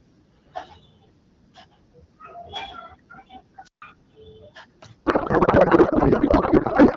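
At 3.63 s there's a wireless microphone squelch dropout. The radio link fades, so the receiver's squelch shuts the output for about 143 ms, and you hear a quick lift of hiss before a near-silent gap, with the speech back by 3.82 s.

From 5.05 s to the end the speech turns into garbled noise and warble. That's a codec payload misread: the decoder is taking octet-aligned AMR frames as bandwidth-efficient ones, so every field lands in the wrong place. The output barely tracks the talking.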